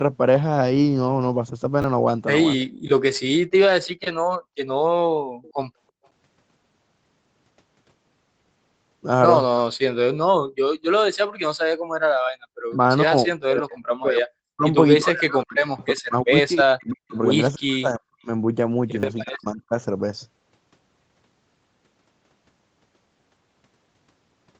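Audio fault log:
1.82 s and 19.0 s, repeated buffer: a tiny slice of sound plays again two and then three times with hard joins, so you get a quick stutter that's almost a buzz. That fits a 10 ms buffer being reused when fresh audio arrived late, losing a few tens of milliseconds each time.
2.6 s, 5.42–6.07 s, 12.7 s and 15.82 s, echo leak: a faint copy of the far side trails it by 331 ms. It sits roughly 30 to 40 dB under the speech, in short scraps apart from the longer patch around 5.4 s. The likely cause is a loudspeaker echo the canceller didn't fully strip out.
12.42–12.56 s, background gated by the echo canceller: the room tone suddenly falls away by about 38 dB for roughly 150 ms, then comes back. It's the canceller clamping down on the microphone while the loudspeaker was active, so the background briefly vanishes into near-silence.
13.04–18.29 s and 19.23–19.74 s, speech suppressed in double talk: the near talker keeps dipping and chopping out, as much as around 40 dB, for about 4 s in the first stretch and under half a second in the second. 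This is likely the canceller ducking everything while both sides spoke together.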